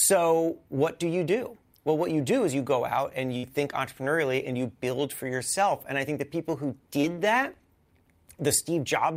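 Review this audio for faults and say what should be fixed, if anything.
A burst of packet loss occurs at 3.37 to 3.45 s in the speech. Several consecutive packets never arrived in time, so the receiver stretched the last good sound across the gap for about 56 ms, fading it out as a held buzz or hiss. When playback resumes, roughly 60 ms of the original audio is simply gone, leaving a small jump in the speech. Preventing this calls for forward error correction with packet interleaving and a jitter buffer deep enough to absorb short network bursts.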